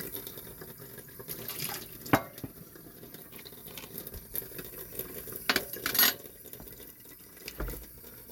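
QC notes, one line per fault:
No faults were heard in this recording of sounds. There is nothing to log against any time in the clip.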